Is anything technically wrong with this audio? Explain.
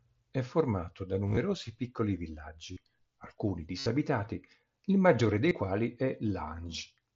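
Yes: concealed Bluetooth headset packet loss at 1.27–1.37 s after "formato da", 2.73–2.77 s, 3.79–3.86 s, and 5.49–5.51 s between "il maggiore" and "quali è". In these spans, lost headset packets are replaced by repeating the best-matching recent stretch of waveform. The result is a buzzy, full-level held tone with a slight warble on recovery, unlike a dropout, which would fall silent. The first event is scattered rather than continuous, and the longest is about 70 ms at 3.79 s. The mSBC wideband link carries the speech up to 8 kHz with light graininess.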